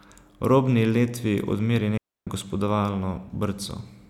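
At 1.97 s the speech drops into a clean hole of near silence lasting about 0.29 s, with no noise burst on either side: a digital wireless dropout. The receiver lost too much data and muted the signal.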